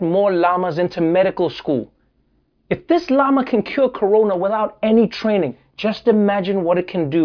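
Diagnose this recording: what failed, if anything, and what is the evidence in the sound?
Nothing stood out on listening to this speech recording; no stage in the chain gave any audible sign of trouble.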